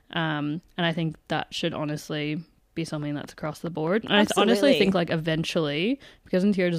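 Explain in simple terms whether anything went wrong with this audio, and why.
Yes. Just after "that should honestly be", from 3.03 to 5.11 s, a train of clicks ticks steadily about 4.8 times a second, around ten alike pops. That even rhythm sets it apart from random crackle, likely from electrical interference or a faulty connection or power supply.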